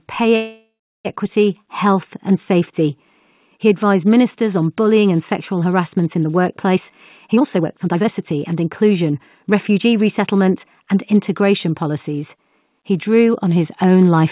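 From 0.36 to 1.07 s there is a call audio freeze, likely caused by packets being held up in transit until the jitter buffer ran dry. The receiver fills the gap by stretching the last sound into a fading buzz or hiss, which then drops to silence for about 340 ms. Playback resumes at "health and safety" with nothing lost. Instead, about 690 ms of filler has been inserted, so everything after it arrives that much later.

Two jitter buffer speed-up passes follow, where the receiver had built up more delay than it targets and trimmed it by cutting out short pitch-period chunks. Right after "sexual harassment in the", from 6.76 to 6.91 s, the audio runs at 126% speed, shedding about 50 ms. A longer stretch from 7.32 to 10.65 s plays at 119% until "and integration policies", dropping roughly 0.7 s. Pitch stays the same throughout, but the delivery sounds rushed. The narrow band, with nothing above 4 kHz, fits the G.711 call codec in the path.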